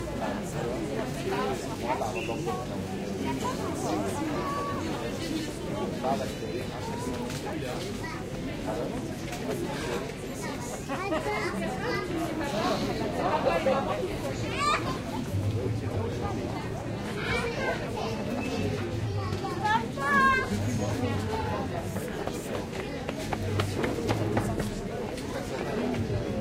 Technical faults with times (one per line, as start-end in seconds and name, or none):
1.74 compressed frames skipped
4.90-4.97 compressed frames skipped
13.89-13.94 compressed frames skipped
19.53-19.56 compressed frames skipped
22.18-22.20 compressed frames skipped